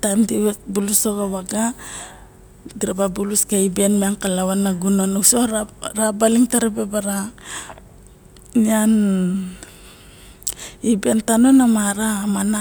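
No technical faults are audible.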